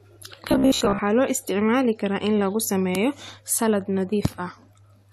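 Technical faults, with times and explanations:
0.49–0.99 s, robotic sound from repeated short buffers: the speech turns into a stiff metallic buzz at about 66.7 Hz just before "loo isticmaali karaa in". It's likely a 15 ms chunk being replayed over and over, with most of the real audio skipped.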